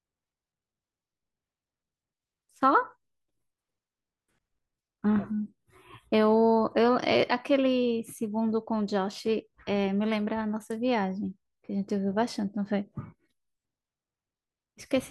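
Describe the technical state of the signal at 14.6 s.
Nothing is wrong with the signal at 14.6 s; the audio is intact at that point.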